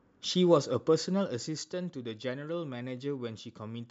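From 0.58 to 1.82 s the speech carries zipper noise: the level falls by roughly 10 dB, but in coarse unsmoothed increments, around a hundred a second, so each jump leaves a tiny click and together they form a fine ticking buzz over the voice while the gain moves. On a waveform the envelope descends as a staircase rather than a ramp; a spectrogram shows faint evenly spaced vertical broadband lines across that stretch.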